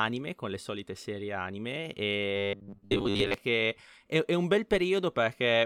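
From 2.36 to 3.34 s, right after "le solite serie anime" and ending before "che è", the speech takes on robotic sound from repeated short buffers. A steady metallic buzz at 100 Hz sits on the speech, which fits a 10 ms chunk being looped for most of that stretch, likely because audio arrived too slowly. Unlike a plain dropout, there is no silence, and unlike a pitch shift, the tone stays fixed while the speech underneath is followed only roughly.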